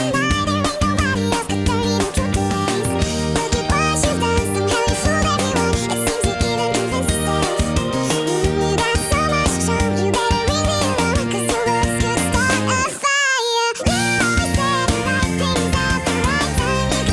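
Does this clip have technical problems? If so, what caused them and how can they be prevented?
Yes, there's a wrong sample rate throughout: everything runs 1.5 times too fast and about 7 semitones high, which fits 16 kHz audio played at 24 kHz. Make sure playback uses the file's native rate, or resample properly before output.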